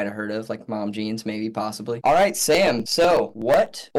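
From 2.30 s to 3.91 s the audio carries periodic USB or driver dropouts: about fifteen regular ticks spaced 0.124 s apart. A recurring bus or driver stall skips roughly a millisecond of samples each time, and each splice leaves an audible discontinuity.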